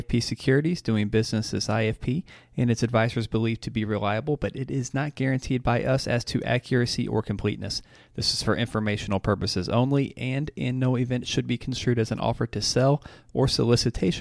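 Speech recording with no technical faults audible anywhere in the clip.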